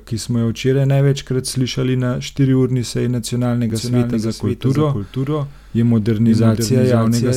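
A speech clip with a doubled audio track from 3.7 s to the end. Just after "slišali na štiriurni seji", a second copy of the speech cuts in abruptly. It trails the original by about half a second and sits a few decibels lower, roughly 5 dB. The copy is full-band, with no decay or room colour, so it reads as a duplicate rather than an echo. The likely cause is the signal being captured again through a slower path.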